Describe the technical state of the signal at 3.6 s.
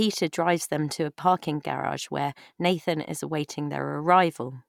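Around 3.6 s the speech signal is intact, with no audible technical fault at that point.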